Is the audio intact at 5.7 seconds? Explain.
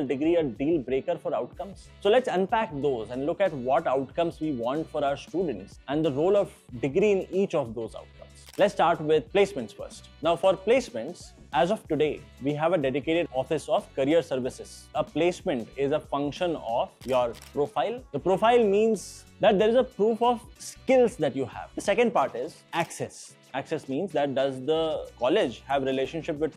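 Yes, the audio is intact at 5.7 seconds, with nothing audibly wrong at that moment.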